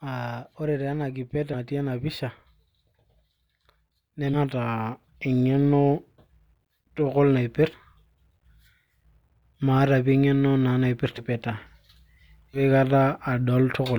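Speech jumps forward at 1.53–1.56, 4.33–4.38, 7.73–7.76, 11.17–11.23 and 12.53–12.61 s, each time losing about a tenth to almost half a second of sound. These are compressed frames skipped: whole frames are never decoded, and the jump sizes fit 20 ms frames.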